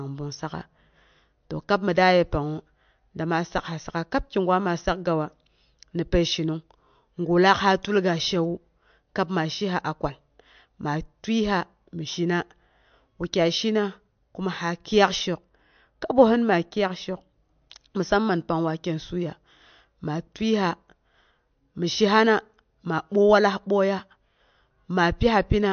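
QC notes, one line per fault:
throughout, MP3 compression: nothing above 6.5 kHz, and the speech sounds watery as weak frequency lines drop in and out, likely from a low-bitrate encode, which fits 48 kbps.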